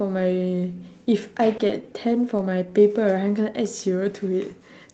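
A speech recording carried over a WebRTC call path, with Opus coding noise at about 32 kbps and a high-frequency cut-off near 8 kHz, shows three kinds of network-timing fault.

First, a short stall from a late packet at 1.57 to 1.61 s: one packet arrived after its playout deadline, so the jitter buffer ran dry. The receiver held the last sound for 20 ms, then resumed exactly where it stopped. Nothing is lost, but a sound is briefly frozen and stretched, and the playout delay grows by 20 ms.

Next come two short concealed packet losses, at 1.67 to 1.83 s and at 2.37 to 2.41 s. In each, 20 ms of audio never reached the decoder in time. The receiver extrapolated from the preceding signal to fill the gap, carrying on its pitch or its noise-like texture, then cross-faded back into the real stream. The first event also adds a little extra time. Both come across as brief smears or wobbles in the speech, where a short consonant can be lost.

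Finally, a jitter buffer slow-down runs from 2.43 to 2.71 s. With its reserve running low or its target delay just raised, the buffer rebuilt depth by repeating individual pitch periods and fragments of pauses, adding 38 ms. Playback drops to 89% speed at unchanged pitch, so the speech sounds drawn out.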